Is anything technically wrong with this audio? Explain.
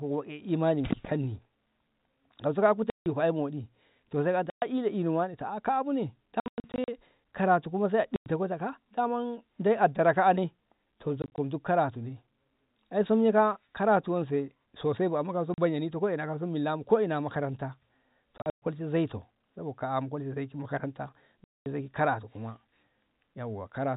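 Yes. The speech has repeated dropouts from packet loss filled with silence at 2.9 to 3.06 s (160 ms, right after "so ka"), 4.5 to 4.62 s (120 ms, after "to sai"), 6.4 to 6.88 s (280 ms lost in scattered pieces, longest 100 ms), 8.16 to 8.26 s (100 ms), 11.22 to 11.38 s (80 ms in short scattered bits, after "dara ka'ane to"), 15.54 to 15.58 s (40 ms), 18.38 to 18.62 s (180 ms, longest run 120 ms) and 21.44 to 21.66 s (220 ms). Whole packets never arrived, and the receiver played plain silence instead of concealing the gap. Every hole is a multiple of 20 ms, which points to a 20 ms packet size. The speech cuts out abruptly at the hard edges of each gap, and the scattered stretches sound stuttered and choppy. The underlying G.711 telephone coding sounds narrow, capped at 4 kHz, as that format always is.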